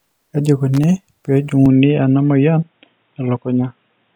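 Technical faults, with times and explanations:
0.74 to 0.84 s, loose connector crackle: A worn or dirty contact in the signal path made and broke repeatedly for about a tenth of a second, chopping the speech on and off, so the passage turns into an irregular burst of scratchy crackle.
1.66 s to the end, input switched to a poorer device: The recording likely moved mid-take to a lower-grade microphone or headset path. With no gap at the change and the level about the same, the speech turns dull and boxy because nothing above 3.8 kHz survives, and a faint new noise floor appears, around 50 dB down.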